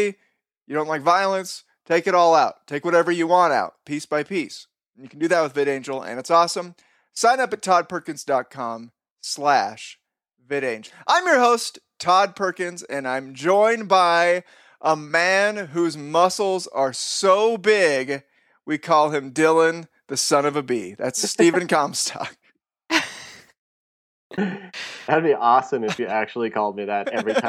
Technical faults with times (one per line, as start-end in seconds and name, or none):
none